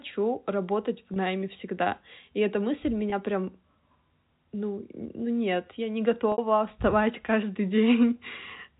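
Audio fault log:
1.14–1.16 s and 3.10–3.12 s, packet loss with pitch repetition: each gap lasts about 20 ms, which fits one lost packet. The receiver filled it by repeating the last pitch period, so the sound briefly holds with a slight buzz over the narrowband G.711 telephone tone.
6.32–6.38 s, packet loss with pitch repetition: a 60 ms gap, which fits three packets in a row. The repeated pitch period runs long enough to fade toward silence before the sound cross-fades back in.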